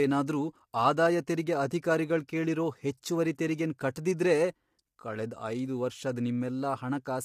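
Speech, coded throughout with what is likely low-delay AAC compression of the AAC-ELD kind used for video calls. With too few bits to go round, the coder leaves noise filling the gaps between the voice's pitch harmonics. The result is plainly audible: a rough, grainy voice with a thin, somewhat synthetic top band, a degree of damage that fits a bitrate around 32 kbps.

At 1.27 s, just before "ತೆರಿಗೆ ಅಧಿಕಾರಿಗಳ್ ಕೇಳಿರೋ ಹೆಚ್ಚುವರಿ", there is pre-echo. A sharp onset landed late in a transform block, and the quantisation noise budgeted for that loud moment was spread across the whole block, including the quiet stretch ahead of it. It comes out as a brief hiss about 10 ms long that leads the attack, leaving the onset sounding softened and smeared rather than crisp.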